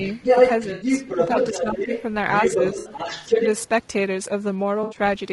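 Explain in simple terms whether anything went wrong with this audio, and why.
Several things went wrong in this speech clip, and they stack on top of each other.

The whole thing has that rough, grainy, slightly fizzy quality of low-delay AAC compression, the kind video-call apps use to keep lag down. This codec works in very short slices of sound, which makes it hard to capture the fine structure of a voice cleanly. The damage is plainly audible here: noise creeps in between the tones of the voice and the top end sounds a bit artificial. That points to a codec squeezed for data.

You can also hear the other side's voice leaking through, from 0.06 to 2.03 s and again from 2.36 to 3.66 s. A second voice sits underneath, about as loud as the main talker. This is likely the far end playing out of a loudspeaker and getting picked back up by the microphone, with the echo canceller failing to scrub it out.

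There are three short dropouts with AAC frame loss and concealment: at 0.73 to 0.87 s, 2.79 to 2.89 s and 4.83 to 4.97 s. They last 80 ms, 60 ms and 80 ms. Chunks of the stream went missing, and the decoder papered over the gaps by reusing and scrambling the last good bit of sound. Each one sounds like a brief smeared, noisy, phasey smudge rather than clean silence.

Finally, there's speech suppressed in double talk. The main voice dips slightly between 1.54 and 1.9 s, and more noticeably around 3.29 to 3.4 s. Both dips fall while the leaked voice is also present. The likely cause is that the echo canceller couldn't tell the talker apart from the echo while both were going at once, so it turned everything down for a moment.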